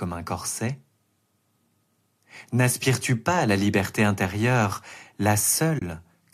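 Right near the end, at about 5.79 to 5.82 s, the speech drops into a short soft-edged gap of roughly 30 ms. That's AAC frame loss with muting. Some coded frames never made it, and the decoder zeroed their spectrum rather than guessing. The overlapping windows taper the sound down and back up, so you hear a quick fade-out and fade-in. The length fits about three frames of the light, likely low-delay AAC coding.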